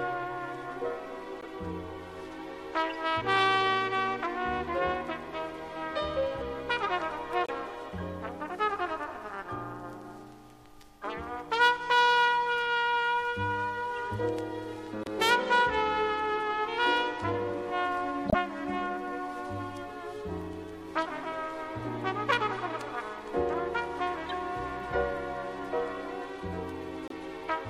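Brief chirps and bursts of noise break in at 1.41, 2.90, 7.44, 13.96, 15.04, 18.29, 24.27 and 27.08 s, each lasting a few tens of milliseconds, the one near 18.3 s loudest. This is corrupt frame decoded: damaged compressed frames were played anyway, spraying energy into the wrong frequencies.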